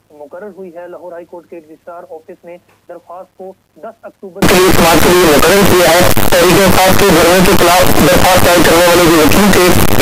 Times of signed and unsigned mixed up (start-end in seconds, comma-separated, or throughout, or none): 4.42-10.01